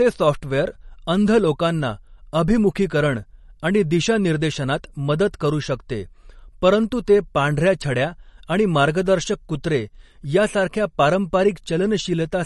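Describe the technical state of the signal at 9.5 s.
At 9.5 s the speech sounds dull and plainly watery, with a swirling, metallic edge on s sounds and nothing audible above about 11.5 kHz. The same damage runs through the whole clip. The likely cause is MP3 compression at a bitrate low enough to fit roughly 40 kbps. Short of bits, the encoder cuts the treble at a fixed point and drops weak frequency lines that flicker between frames.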